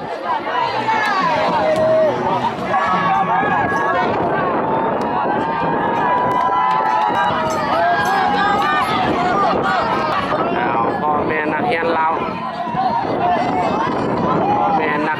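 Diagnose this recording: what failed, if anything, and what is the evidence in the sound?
Three abrupt discontinuities at 6.32, 7.15 and 10.12 s each have the sound jumping forward with no gap of silence. About a tenth of a second seems to go missing at 6.32 s, and roughly a third of a second at each of the later two. This points to the driver or buffer stage, likely a dropped buffer (overrun), where audio was overwritten before being read, leaving the surrounding material spliced together directly.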